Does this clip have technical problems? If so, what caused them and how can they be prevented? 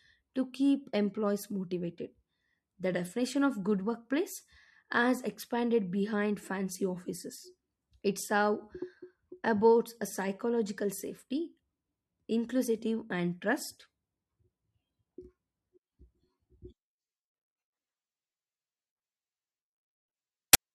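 Yes. At 20.53 s there are file tags played as audio: the player read the compressed bytes of an embedded cover picture as if they were samples, giving a brief, hard-edged burst of very loud white-noise static. To prevent it, have the player parse and skip metadata blocks before decoding audio.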